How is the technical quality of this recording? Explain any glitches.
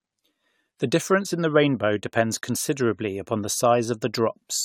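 Quality is degraded throughout by generation loss. From start to end the speech sounds swirly, smeared and hollow, with softened consonant attacks and nothing above 19.3 kHz. The likely cause is repeated lossy re-encoding, around five passes at something like 96 kbit/s AAC, each requantising on a shifted frame grid so the errors accumulate.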